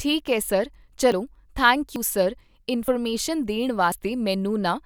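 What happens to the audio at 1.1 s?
At 1.12 s there is an abrupt jump in the speech, likely a dropped buffer (overrun): around 40 ms was overwritten before being read, so the two sides join directly.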